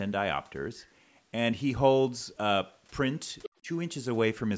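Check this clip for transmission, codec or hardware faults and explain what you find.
Two echo-related faults appear in this speech clip, both around the 3.5-second mark.

From 3.42 to 3.50 s, the other side's voice is leaking through, roughly 15 dB below the talker. The likely cause is an echo canceller leaving loudspeaker playback in the microphone. On a spectrogram it shows as a faint, separate harmonic stack.

From 3.61 to 3.68 s, speech is suppressed in double talk. The level dips by around 20 dB for under a tenth of a second, likely because the canceller ducked both voices at once. The waveform shows a brief notch in the envelope.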